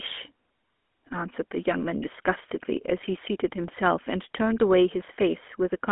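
Throughout the speech, the GSM full-rate codec leaves a plainly audible buzzy, gravelly roughness. Its pulse-driven vocal-tract model coarsely rebuilds the excitation, which fits a 13 kbps coder. Plain band-limiting to 250 Hz–3.4 kHz would sound thin but smooth; this grit sets it apart.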